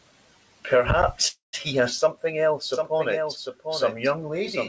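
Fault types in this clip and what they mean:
call audio freeze: From 1.28 to 1.55 s the last sound is stretched into a fading buzz, then silence, likely from delayed packets. It resumes intact at "he has something else".
doubled audio track: From 2.73 s to the end, a dry full-band copy about 5 dB quieter trails roughly 0.7 s behind, likely from a second capture path.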